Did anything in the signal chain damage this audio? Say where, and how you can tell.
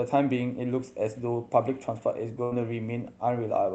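Yes, and it happened on the network side. At about 2.43 s there's a burst of packet loss lasting roughly 100 ms, through 2.53 s. The receiver had nothing to play, so it kept stretching the last bit of sound for around 80 ms, fading it out as a held buzz or hiss. When the speech comes back, about 80 ms of it has simply been skipped. The call codec's path ahead of it is fine, with a top end near 8 kHz.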